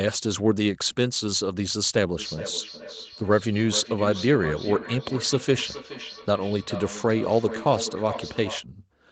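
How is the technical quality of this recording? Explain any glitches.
The speech has a noticeable echo problem from 2.18 s to 8.67 s, where each phrase comes back again roughly every 0.4 s, thinner and more ringing on each pass, with the strongest repeats reaching about 12 dB below the direct speech. This is feedback echo between two devices: two devices in the same room are on one call, and one plays back what the other's microphone sent. That microphone then picks the sound up again. Each device's echo canceller removes only what that device itself plays, so the loop goes round at a steady delay. The audio's top end stops at around 8 kHz, which fits a wideband call codec.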